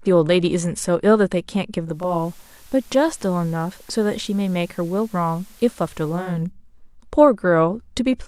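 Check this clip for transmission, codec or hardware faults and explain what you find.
One fault: digital radio blending to analogue, 1.82 to 6.52 s. Digital reception dropped, so the receiver cross-faded over 0.48 s to FM. Faint hiss appears and the level falls about 1 dB.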